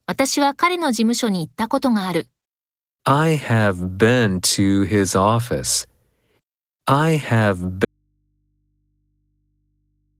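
At 7.85 s, after "I have", the speech cuts out abruptly to the end. This is an audio dropout to a faint residue, leaving only hum about 50 dB down. The likely cause is a lost input with the line still live.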